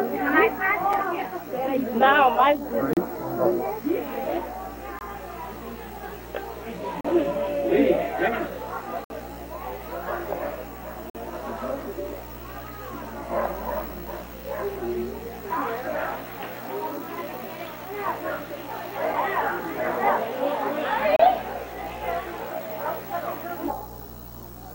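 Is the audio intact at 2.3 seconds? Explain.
Yes, at 2.3 seconds the audio plays through intact, with no dropout, click, distortion or other fault audible at that point.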